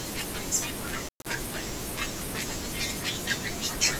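Right around 1.06 s the speech drops out, and it doesn't come back until about 1.28 s. That's an intermittent contact: a loose plug or cable losing its connection for a moment. The line is actually open for about 175 ms of that stretch, so the signal just vanishes and leaves faint hiss underneath. You'll also catch a scratchy crackle at both edges as the contact breaks and then remakes.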